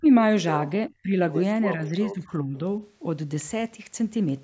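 Speech suppressed in double talk occurs at 0.0–0.07 s, 0.89–1.16 s and 1.74–2.57 s. The speech dips by about 30, 20 and then 10 dB, likely because an echo canceller mistook it for loudspeaker echo.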